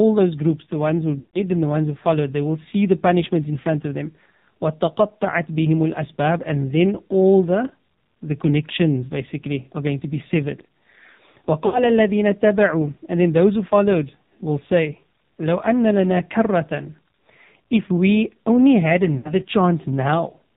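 Throughout, the speech sounds buzzy and synthetic, with nothing above 4 kHz and heavy codec damage that leaves the voice thin and mechanical. This is the AMR narrowband mobile codec at work, which fits a very low bitrate around 5.9 kbps. It samples at 8 kHz and rebuilds the voice from a vocal tract model, a pitch predictor and only a few pulses per 5 ms, so most natural detail is lost.

At 1.20 to 1.42 s, just before "and the ones who", the voice smears into a drawn-out, sustained tone that fades toward silence, then returns weak and rough. The same happens at 11.66 to 11.90 s and at 19.18 to 19.43 s, right after "we only had". These are lost AMR speech frames, covering about 140 ms, 80 ms and 60 ms. The decoder repeated the last good pitch and vocal tract settings with falling gain until good frames arrived again.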